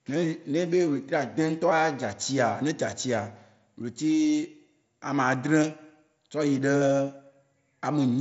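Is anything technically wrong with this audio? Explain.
No, nothing is technically wrong with this audio.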